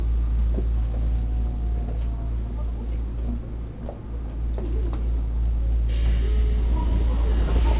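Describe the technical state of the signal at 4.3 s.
At 4.3 s the sound is intact, with no fault present, only the narrow, telephone-like band of the call path it passes through, which carries nothing above 4 kHz.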